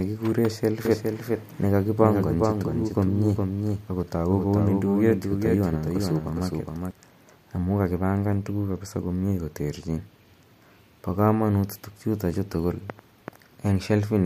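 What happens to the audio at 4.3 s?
At 4.3 s the speech sounds twice. A doubled audio track, from 0.85 to 6.91 s, adds a full-band copy about 5 dB quieter and roughly 0.4 s behind, likely from a slower second capture path. Unlike echo, it has no decay or room colour, and it starts and stops abruptly.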